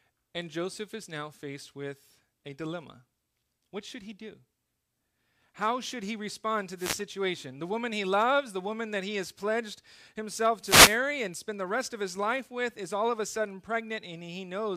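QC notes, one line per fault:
6.76–7.01 s and 10.62–10.99 s, wireless microphone noise hit: two short bursts of static-like swish, about 0.25 s and 0.37 s long. The FM radio link from an analogue wireless microphone momentarily fades as reflected signals cancel, so receiver noise surges up.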